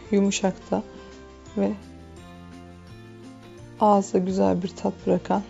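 From 1.76 to 3.86 s the audio turns dull with a faint metallic shimmer, showing imaging from linear upsampling. The interpolation points to a 16 kHz to 48 kHz conversion that leaves a weak mirror copy between 8 and 16 kHz, roughly 35 dB down.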